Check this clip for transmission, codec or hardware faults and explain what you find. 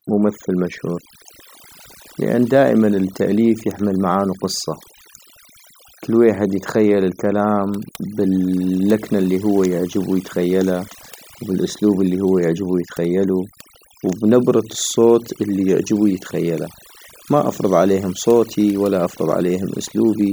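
One fault runs through the whole speech clip: overdone noise removal. A noise reduction stage set far too aggressively mutes every frequency band near its noise estimate, leaving near-silent gaps with twinkling specks.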